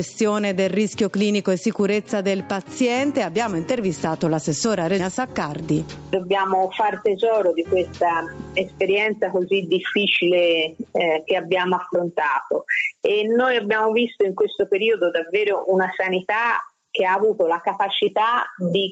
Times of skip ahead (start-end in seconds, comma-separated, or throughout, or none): 4.99